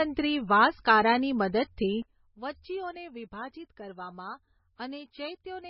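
From the start, the speech has a hard ceiling with nothing above 5.5 kHz, a watery, swirling texture and smeared consonant attacks. This is heavy damage, likely from MP3 compression at a very low bitrate near 19 kbps. The fixed cutoff and frame-to-frame swirl set it apart from simple low-pass filtering.

At 2.02 s the level drops by about 14 dB in a single step and stays down to the end. The background noise falls with the speech, which points to a sudden gain jump, likely an unramped digital gain change rather than a fade or the talker moving away.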